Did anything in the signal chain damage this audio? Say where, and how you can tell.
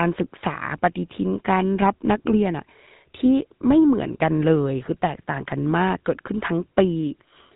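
Yes. The speech has a buzzy, gravelly roughness from start to finish, and everything above about 3.8 kHz is missing, so it sounds dull and boxed-in. The damage happened at the codec stage: this is the GSM full-rate codec, and the level of degradation fits its 13 kbps mode. The codec rebuilds the voice by driving a vocal-tract filter with coarsely spaced excitation pulses, and that coarse excitation is what produces the grainy texture heard throughout.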